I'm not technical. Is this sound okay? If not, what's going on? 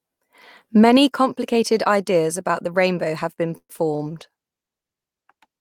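No. This speech clip has four problems, all close together near the end.

At 3.57 s the sound stalls until about 3.71 s. The last sound is stretched out, then there is a short silent moment of about 50 ms, and then the speech picks up where it left off. This is a call audio freeze. Data was likely held up on its way, so the receiver had nothing to play. Nothing is lost, but the speech now runs about a tenth of a second late.

Just after "the rainbow have been" there are two brief blips. One is from 3.77 to 3.80 s and the other from 3.96 to 4.01 s. Each is short concealed packet loss. A tiny piece of the call never arrived in time. The receiver covered the hole by continuing the sound it had just played, then blended back in. You hear a quick smear or wobble, and a small bit of speech may be missing.

From 4.10 s until the end of the clip, the speech gets rougher and more muffled. This is a call bitrate drop. 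The connection seemed to get worse, so the call switched to a much lower-quality setting to keep going. Detail and crispness are lost, and the sound stays this way for the rest of the clip.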